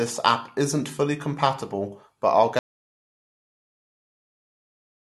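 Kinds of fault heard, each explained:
Audio dropout to silence: After "fully compatible but I'll", at about 2.59 s, the speech stops mid-phrase and the clip falls into dead silence that runs to the very end, with no room tone, hiss or breath underneath. Whatever followed in the sentence is simply gone. That total silence, rather than a fade, means the input signal was likely lost, through a disconnected device, a failed link or a mute, while recording carried on writing silence.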